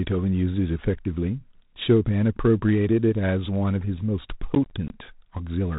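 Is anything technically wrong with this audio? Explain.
Yes, there are two faults.

Throughout the clip, the speech has been coded as G.726 ADPCM, sending only a few bits per sample of difference from an adaptive prediction. That leaves a plainly audible harsh, rasping hiss that tracks the speech level, plus a hard band limit near 3.8 kHz, which fits the 24 kbit/s mode.

From 4.55 to 4.9 s there is processor overload crackle. The processor repeatedly failed to finish its short audio buffers, of around 10 ms each, in time, and several in a row came out as tiny silent gaps with hard edges. The result is a gritty burst of crackle that stops once the load eases.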